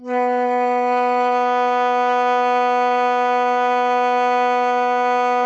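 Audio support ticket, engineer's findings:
HE-AAC compression, whole clip, music. The treble sounds gritty and metallic, and the upper harmonics don't line up with the lower ones. Nothing above 7.9 kHz. Likely component: an HE-AAC encoder, with damage heavy enough to point to a very low bitrate near 8 kbps. Mechanism: the core codes only the lower band, and spectral band replication copies it upward under a coarse envelope. Spectrogram: a hard ceiling at 7.9 kHz, with the upper band showing blocky repeated copies of the lower texture instead of true harmonic lines.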